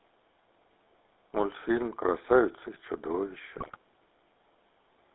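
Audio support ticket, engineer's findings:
GSM full-rate codec throughout. Vocal tract modelled as a filter, driven by regular pulse excitation that keeps one sample in three, at a rate that fits 13 kbps. Line band roughly 300 Hz to 3.7 kHz, so nothing above that survives. Result: clearly audible buzzy, gravelly roughness over the whole speech clip, with thin, band-limited highs.

GSM bit errors, 3.58 to 3.77 s. Weak radio link let corrupted bits reach the decoder, at an error rate near 5 percent. Damaged filter, pitch and gain parameters bend the spectrum and spike the level frame by frame for about 190 ms. Result: a burst of squawks, pops and gargling that breaks the speech apart, then stops.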